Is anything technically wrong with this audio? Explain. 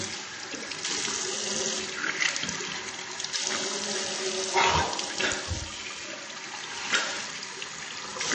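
Yes. Throughout the clip the sound is plainly damaged by what is likely MP3 compression, and the heavy damage points to a very low bitrate, around 32 kbps. Nothing comes through above about 8.3 kHz, so the top end sounds dull and boxed in. That's what happens when the encoder runs out of bits. It chops the treble at a fixed point and drops the weaker frequency detail, which flickers in and out frame to frame and gives the audio a watery, swirly quality.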